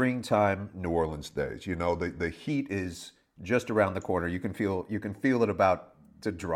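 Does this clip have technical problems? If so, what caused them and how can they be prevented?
Yes. From 0.86 to 2.49 s the speech has a wrong sample rate fault: it slows to about 0.92 times normal speed and drops about 1.5 semitones in pitch. This fits 48 kHz audio played back at 44.1 kHz without resampling. To prevent it, resample explicitly whenever the source and device rates differ.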